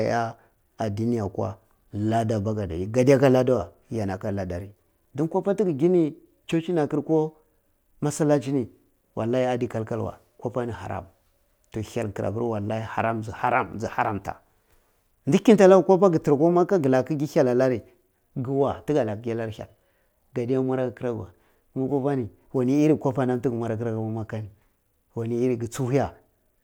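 Nothing stood out on listening to this speech recording.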